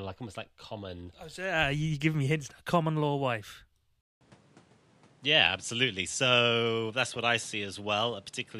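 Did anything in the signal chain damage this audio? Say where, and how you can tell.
Yes. After "law wife", a 0.2 s silence at 4.01 s, then duller speech with nothing above 11.4 kHz and faint new noise: likely the input switched to a poorer device.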